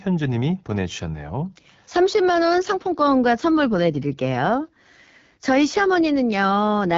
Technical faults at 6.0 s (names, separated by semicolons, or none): AMR wideband (HD Voice) codec